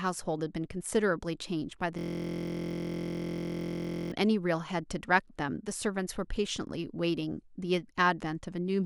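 From 1.99 s to 4.12 s the speech gives way to a system hang loop: the host or driver stalled while the audio hardware kept replaying its ring buffer. A 23.22 ms slice, which fits a 1024-sample buffer, repeats some ninety times, and at a loop rate of 43.1 Hz the repetition fuses into a steady, rough buzz pitched at that rate rather than a distinct stutter. Normal playback resumes once the system recovers.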